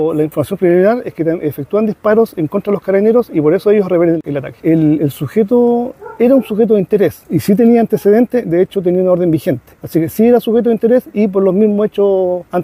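No technical faults can be heard anywhere in the clip.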